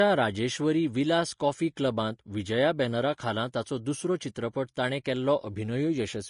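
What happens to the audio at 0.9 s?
At 0.9 s the speech carries the same damage heard across the whole clip, likely Vorbis compression. Nothing sounds above about 10.5 kHz. Coarsely quantised treble turns into grainy hiss, and consonant attacks blur. The plainly audible damage fits a low rate near 36 kbps.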